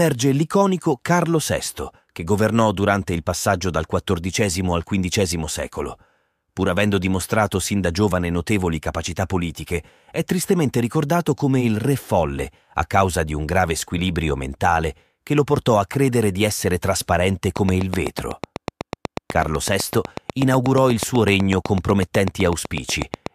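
From 17.57 s, right after "credere di essere trasparente", a train of clicks runs to 23.27 s: about 50 sharp, near-identical ticks at a steady 8 per second, standing well above the speech and carrying on through the pauses. That even pacing and repeated shape set it apart from random crackle or dropout glitches, which would scatter irregularly and vary in character. The source is likely electrical interference from nearby equipment or a faulty connection or power supply.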